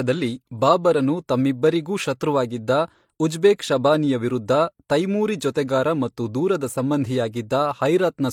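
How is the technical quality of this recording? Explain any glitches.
The speech is degraded by layered compression throughout. From start to end, two different kinds of codec artefacts sit together below an 18.5 kHz ceiling, likely from transcoding between lossy codecs. The mix points to MP3 re-encoded as HE-AAC, with each pass adding its own artefacts, unlike a single encode.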